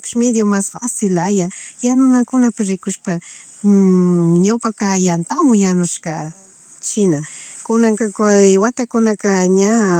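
No technical faults can be heard anywhere in this recording. Nothing in the speech points to a problem in how it was captured, processed or delivered.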